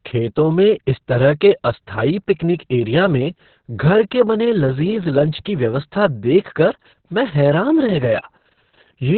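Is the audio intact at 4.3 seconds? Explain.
No. At 4.3 s, as across the whole clip, the speech carries Opus voice compression damage: nothing above 4.3 kHz, a narrowband SILK coding with coarse excitation that sounds muffled, hoarse and slightly robotic, which fits a very low bitrate near 6 kbps.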